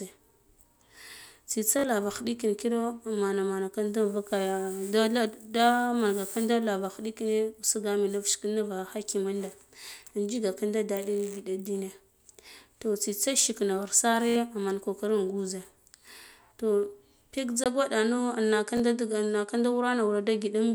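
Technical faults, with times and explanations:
1.79–1.84 s, 14.29–14.36 s and 18.77–18.80 s: repeated buffer. At each point, new audio arrived late, so the same piece of roughly 21 ms, consistent with a 1024-sample buffer, was played again: twice more at 1.79 s, three times at 14.29 s, once at 18.77 s. Each is a brief stutter with hard joins, and roughly 40, 70 and 20 ms of real audio are lost. On a waveform, identical short blocks sit side by side with abrupt steps at their edges. On a spectrogram, the same slice repeats between sharp vertical seams.
17.64 s to the end: input switched to a poorer device. A gap of about 20 ms is followed by sound of similar loudness but a duller, narrower tone, likely because recording moved to a different, lower-quality input. Nothing above 11.4 kHz survives, and a new noise floor about 50 dB below the signal appears. On a spectrogram, the upper band goes empty abruptly at the switch, with a thin vertical gap and a faint steady noise haze after it.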